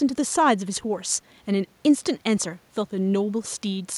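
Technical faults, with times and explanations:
Nothing stood out on listening to this speech recording.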